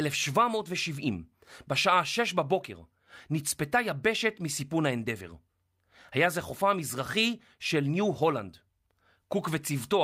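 A speech recording with no technical faults. Nothing audible in it points to a problem in how the sound was captured, processed or played back.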